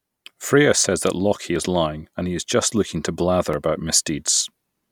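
Audio missing between chunks at 1.56 s, just before "lying that he is", and at 3.53 s, just after "is just looking to", in this speech clip: roughly 20 ms vanishes each time and the sides butt together, a skip that likely comes from a processor dropping samples at 2-second chunk boundaries.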